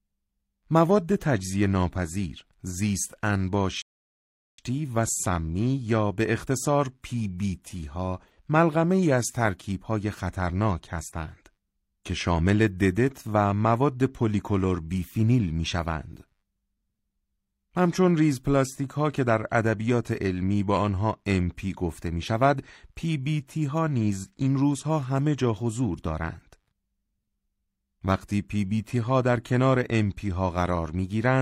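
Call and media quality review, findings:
Rebuffering stall, 3.82–4.59 s. Speech cuts to silence for about 0.76 s, then resumes at the exact point it stopped; nothing skipped, only time added. Component: player buffer. Mechanism: downloaded audio exhausted, playback paused until more data arrived.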